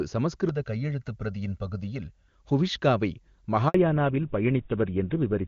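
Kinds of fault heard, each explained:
Channel delay (comb filtering): from 0.49 to 2.28 s one side lags by roughly a millisecond and a half, so the mono sum notches out regularly from around 300 Hz, sounding hollow.
Handover gap: at 3.68 s the speech drops out for 60 ms while the call switches networks, and whatever was said in that moment is simply gone.
Fallback to narrowband: from 3.74 s to the end nothing survives above 4 kHz. The clean HD Voice sound turns dull and rough, which points to a drop to GSM full rate.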